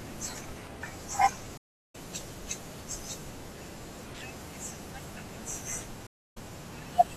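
At 1.57 s a stream reconnect cuts the speech for 365 ms, after which a fresh decoder resumes about 0.4 s further on. Another at 6.07 s leaves 292 ms of silence, then resumes 168 ms earlier, repeating a moment of sound. Both appear as blank gaps in waveform and spectrogram.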